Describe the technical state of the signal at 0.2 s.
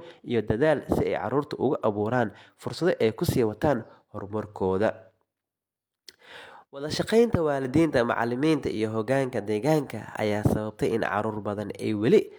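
At 0.2 s the speech signal is intact, with no audible dropout, clipping, distortion or other technical fault at that moment.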